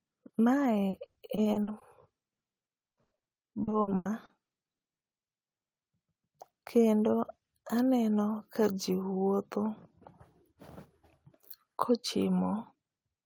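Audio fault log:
0.89–1.83 s: repeated packet loss (robotic sound). Around ten short dropouts, none longer than 40 ms, cover about 30% of this stretch. Each hole is bridged by stretching the preceding sound, so the speech turns choppy.
2.39–4.81 s: repeated packet loss (robotic sound). About fifteen dropouts, the longest 100 ms, fill about 26% of the span. The repeated patching gives a choppy sound with pieces missing.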